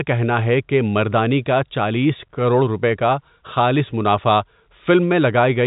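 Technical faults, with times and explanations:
No technical faults are audible anywhere in this speech.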